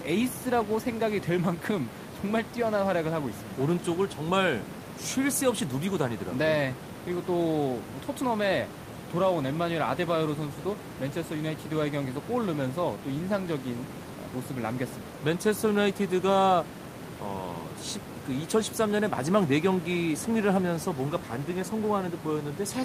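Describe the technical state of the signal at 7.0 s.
At 7.0 s the audio is intact, with only the room's own background noise sitting about 13 dB below the speech.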